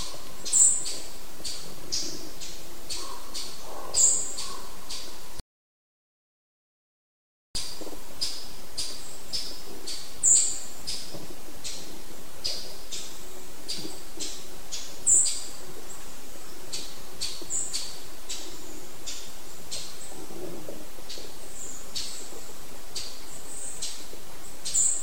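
At 5.40 s the player ran out of downloaded audio and had to wait for more data before it could continue, which is a rebuffering stall. The sound cuts abruptly to silence and stays silent until 7.55 s, then picks up again exactly where it broke off. Nothing is skipped or repeated; the stall simply inserts a gap of about 2.15 s, stretching the timeline by that amount.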